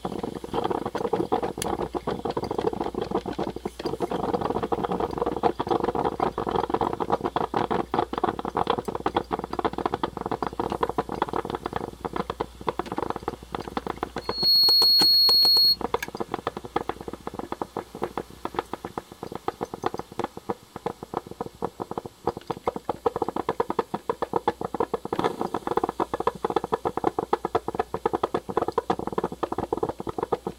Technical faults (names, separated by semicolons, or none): loudspeaker feedback squeal